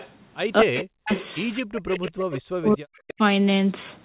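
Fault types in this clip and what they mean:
Echo leak, 0.0–0.1 s, 0.76–1.3 s, 1.88–2.41 s and 2.95–3.14 s: a faint copy of the speech follows it 230 ms late, roughly 15 to 25 dB below, likely loudspeaker sound reaching a microphone that the echo canceller failed to fully remove.
Speech suppressed in double talk, 0.62–1.11 s, 1.6–2.19 s and 2.58–3.2 s: the speech dips, at worst by around 40 dB, while the other side talks, likely an echo canceller that confused overlapping talk with echo and turned both down.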